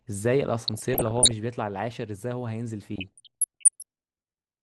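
Speech, dull and granular throughout, with plainly audible gurgling on the upper bands that points to MP2 compression at a low rate, likely around 80 kbps. DAB burbling, short blips of noise in single sub-bands, appears from 0.68 to 1.31 s and from 2.96 to 3.83 s, consistent with bit errors slipping past error correction at roughly 0.7 percent.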